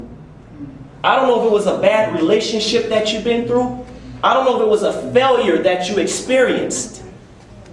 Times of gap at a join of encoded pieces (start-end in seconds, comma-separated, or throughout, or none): none